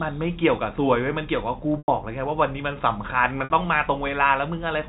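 Packet loss with pitch repetition occurs at 1.78–1.88 s (100 ms) and 3.44–3.50 s (60 ms). The receiver loops the last pitch period across each gap, giving a brief buzzy hold that fades. A waveform shows identical repeating cycles, and a spectrogram shows flat, frozen harmonics.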